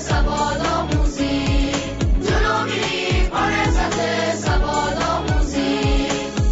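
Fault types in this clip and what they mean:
No fault types are present in this clip.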